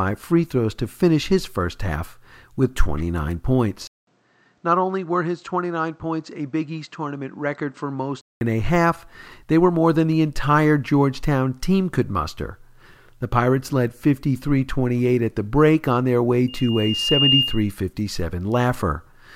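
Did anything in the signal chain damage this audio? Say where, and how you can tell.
Yes. From 3.87 s to 8.41 s the input switched to a poorer device. A silence of about 200 ms opens the span. The speech then drops roughly 10 dB, loses everything above 8.2 kHz, and gains a noise floor around 40 dB below it. The switch comes just before "a half they were". This points to the capture stage: the system likely moved the input to a narrower-band microphone or headset profile, then returned to the original one.

A loudspeaker feedback squeal starts at 16.48 s, right after "break on their way", and runs to 17.71 s. It is a single 2.8 kHz tone that swells over about 0.7 s until it sits some 5 dB above the speech. The fault lies outside the digital chain, in the acoustic loop between playback and capture. The microphone is hearing its own loudspeaker, and at 2.8 kHz the loop gain exceeds one, so that tone feeds on itself and keeps growing.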